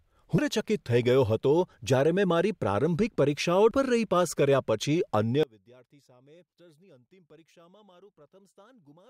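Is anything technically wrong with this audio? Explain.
Yes. There is damaged data in a compressed stream at 0.38 s and 3.71 s. The decoder loses sync on the corrupted frames.

From 5.43 s to the end, the speech drops by about 30 dB and turns faint. The likely cause is one channel inverted, cancelling centred sound when the channels are summed to mono.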